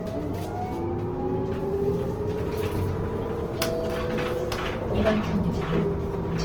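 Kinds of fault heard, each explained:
Opus compression: The sound throughout is grainy and rough, with tonal parts smeared into noise rather than swirling, which points to the likely cause of Opus coding in its music mode at a low rate, around 16 kbps. With too few bits, band energies are kept but detail is refilled by folding or noise. On a spectrogram the bands look filled but speckled and textureless, still reaching about 20.3 kHz. The waveform shows no obvious change.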